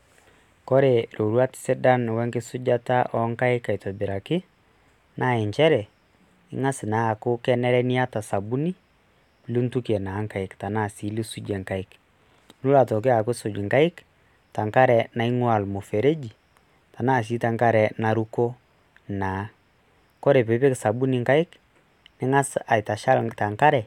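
Nothing in the speech stood out as a technical problem on listening.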